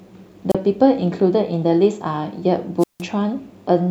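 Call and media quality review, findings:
Wireless microphone squelch dropouts, two hits on the speech. First at 0.50 to 0.55 s: short hiss swell, then about 32 ms of near silence before the voice comes back. Second at 2.79 to 3.02 s, longer: about 164 ms muted. Probable component is the analogue FM radio link. RF fades, the receiver's squelch gates the output shut, then reopens once signal recovers. Worth checking antenna placement and line of sight.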